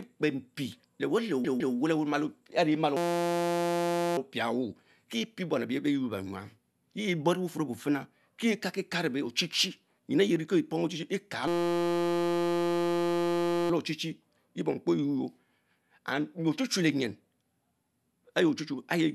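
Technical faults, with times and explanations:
1.44 to 1.75 s, repeated frames: a block of about 157 ms plays two extra times, so the passage stutters and the clip grows by about 313 ms. That block length fits a run of six compressed frames. On a waveform the same 157 ms shape appears three times in a row. A spectrogram shows an identical patch of energy repeated.
2.97 to 4.17 s and 11.48 to 13.70 s, system hang loop: in both spans the playback system froze while the hardware kept cycling one tiny buffer. A 5.8 ms piece loops hundreds of times, which fits a 256-sample buffer. This is heard as a steady buzz at 172 Hz rather than a stutter, and little or no audio seems to go missing. A waveform shows a rigidly periodic pattern. A spectrogram shows flat horizontal lines at 172 Hz and its multiples.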